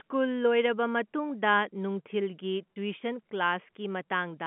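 At about 2.74 to 2.76 s there's a brief packet loss with pitch repetition: roughly 30 ms of speech goes missing, likely a single lost packet. The receiver loops the last pitch period, so it comes across as a short, slightly buzzy hold over the narrow telephone band.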